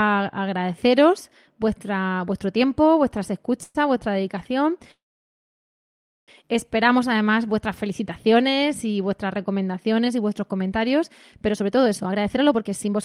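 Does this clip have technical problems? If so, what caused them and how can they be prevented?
Yes. After "agradeceros vuestro tiempo vuestras", a call audio freeze stretches the last sound for 0.11 s at 3.63 s. A second, at 4.91–6.31 s, fades into about 1.3 s of silence, then the speech resumes intact. Delayed packets likely emptied the jitter buffer. A larger adaptive buffer or a steadier network path prevents this.

After "recomendaciones y vuestros comentarios", from 11.49 s to the end, a jitter buffer speed-up plays speech at 139% speed, hurried but at normal pitch. The receiver trimmed pitch periods, roughly 0.7 s in total, to drain an overfull buffer. Gentler, slower delay reduction prevents it.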